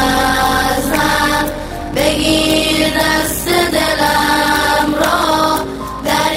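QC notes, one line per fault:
throughout: block size mismatch (padded), zero-filled gaps in every block give a steady 46.9 Hz buzz and 0.861x playback with the timbre kept, which fits 1024-sample reads.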